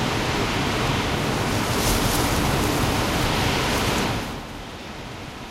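No technical faults can be heard in this recording of everyday sounds. Where the level shifts, it moves smoothly, as with a fader, easing up or down rather than jumping.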